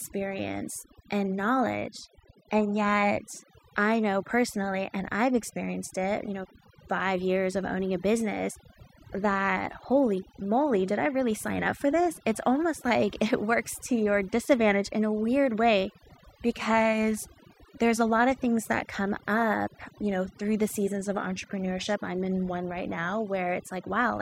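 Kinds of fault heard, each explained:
Overdone noise removal: a noise reduction process has been pushed too hard across the whole speech clip. Each frequency band that sits close to the estimated noise level is pulled down sharply or shut off entirely, and the softer parts of the voice fall below that threshold along with the noise. The background drops and breaks up into twinkling specks.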